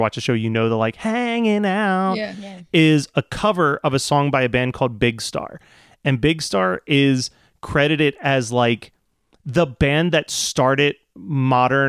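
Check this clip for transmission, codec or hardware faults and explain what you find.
Nothing turns up here; the speech runs along steadily with no transmission, codec or hardware trouble to point to anywhere in the clip.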